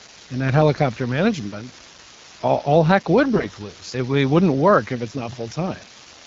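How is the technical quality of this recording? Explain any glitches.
The recording has two faults: a constant crackle from a bad data line, and two short bursts of corrupted speech frames. The wideband speech coding itself sounds clear, which fits a mode around 12.65 kbit/s.

Throughout the clip there is an unreliable data bit. One line in the digital path is marginal, so its bit flips in a random share of samples. Each flip adds a spike of identical size, which you hear as a steady fizzing crackle that continues through the pauses.

From 0.74 to 0.79 s there are AMR bit errors. The transmission link flipped a small share of the less protected bits in what sounds like a few frames. The checksum on the essential bits still passed, so the damaged frames were decoded anyway. The voice keeps its pitch and level but briefly turns scratchy.

From 3.36 to 3.54 s there are heavier AMR bit errors, with several percent of bits flipped over roughly nine frames' worth of audio. 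The excitation pulses land in the wrong places, and the gain and spectral details drift. The voice becomes hoarse and gargly for almost a fifth of a second.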